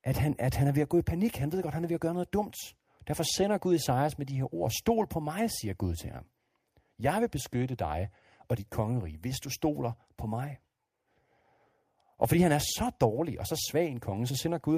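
No technical faults are audible anywhere in the recording.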